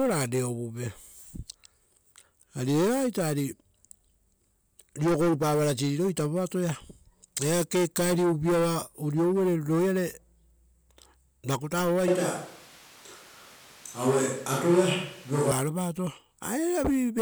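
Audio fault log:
12.08–15.51 s, switch to a distant microphone: the speech suddenly turns roomy and hollow, with thinner low end and room noise sitting roughly 25 dB below the speech, then snaps back to its close, full sound at 15.51 s. The overall level barely changes, but the reverberant, bass-light character and the raised noise floor mark the switch. The cause is likely a dropout of the close microphone, with a far-off pickup covering the gap.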